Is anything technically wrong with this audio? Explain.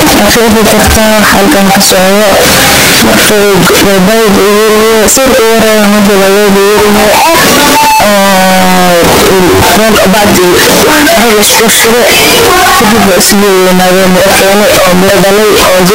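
Yes. Throughout the speech, the sound is extremely loud, harsh distortion, with quiet stretches blaring as hard as the rest. The likely cause is signed and unsigned mixed up: 16-bit samples read with the wrong sign convention flip the top bit, so every zero crossing leaps across the full range.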